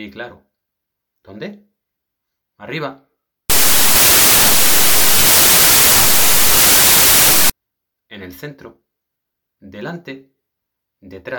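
From 3.50 s to 7.50 s the audio gives way to loud, harsh broadband noise, the signature of samples built from the wrong bytes. For those four seconds the reader is assembling each sample from misaligned or swapped bytes, so the rapidly changing low-order bits land in the most significant positions and dominate every value. The noise stays loud throughout, and it ends at 7.50 s.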